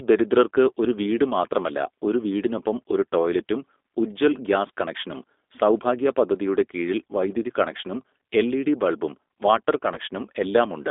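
From start to finish, the speech has the clearly audible roughness of the G.729 codec. It sounds like an 8 kbit/s coder that rebuilds each frame from a vocal-tract filter and a few pulses. Everything sits in a narrow line band of roughly 250 Hz to 3.6 kHz, with a slightly synthetic, gritty edge.

Right after "കണക്ഷനും എൽഇഡി ബൽബും വാട്ടർ", at 9.94 to 9.99 s, there's VoIP packet loss concealed by the speech codec. The decoder stretches its last pitch and filter into a brief buzzy or noisy smear, and the voice stays thin for a moment afterwards. It fits a single lost 20 ms packet.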